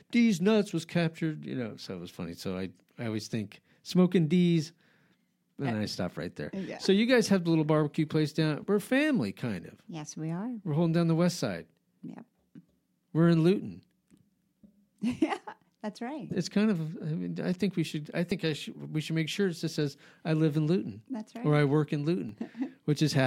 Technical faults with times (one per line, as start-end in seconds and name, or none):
3.89 dropped buffer (overrun)
7.96 dropped buffer (overrun)
18.31 dropped buffer (overrun)
22.29 dropped buffer (overrun)